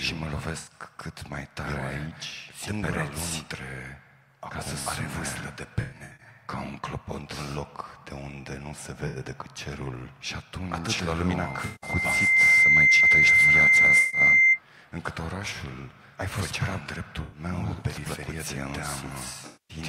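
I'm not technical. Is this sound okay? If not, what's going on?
No. There are AAC frame loss with concealment dropouts at 0.58, 5.81, 9.07, 11.65, 14.0, 17.22 and 19.46 seconds. Bits of the compressed stream went missing. The player guessed the gaps, leaving brief smeared, noisy patches.

From 11.36 to 14.6 seconds there is loudspeaker feedback squeal. A microphone picked up its own speaker. A piercing 2.1 kHz tone swells over about a second.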